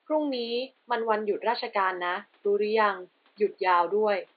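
A speech recording with nothing technically wrong with it, the only background being the room's own noise sitting about 41 dB below the voice.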